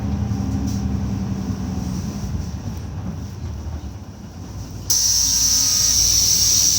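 A recording of sounds with no technical fault to be heard anywhere in the signal.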